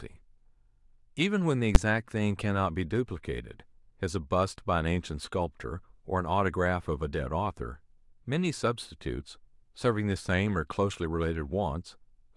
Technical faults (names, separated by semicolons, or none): invalid numbers at full scale